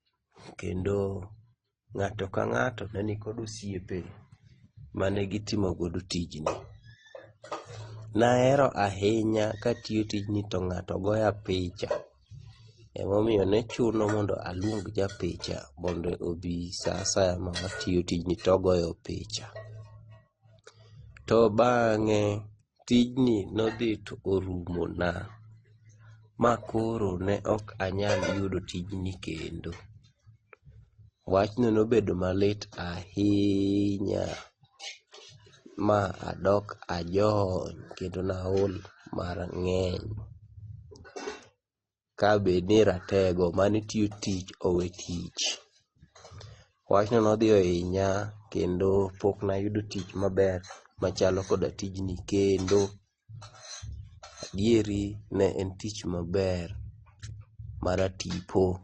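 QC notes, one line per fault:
Throughout: transcoding between lossy codecs. The speech was likely encoded at a low bitrate, probably MP3 around 32 kbit/s, and then re-encoded with Opus around 24 kbit/s. The second encoder spent its small budget reproducing the first one's artefacts, then added its own, so both kinds of artefact are heard together. Nothing remains above 9.6 kHz, which dulls sibilants and gives the speech a muffled, closed-in top end.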